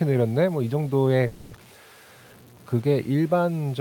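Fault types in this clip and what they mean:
Low bit depth without dither: Throughout, the speech carries grainy distortion about 30 dB below the signal, likely from truncation to around 7 bits with no dither. Unlike steady dither hiss, the error follows the signal, turning quiet passages gritty rather than adding constant noise.
Call audio freeze: From 1.27 to 1.54 s the last sound is stretched into a fading buzz rather than silence, likely because delayed packets left the jitter buffer empty. Unlike packet loss, nothing is cut. The speech resumes where it stopped, about 240 ms later.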